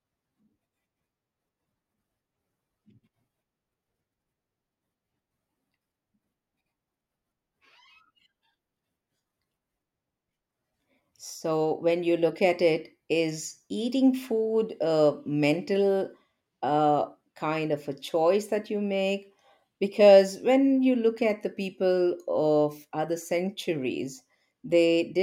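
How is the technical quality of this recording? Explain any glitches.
No glitches turn up anywhere in this recording. There is nothing technical to explain.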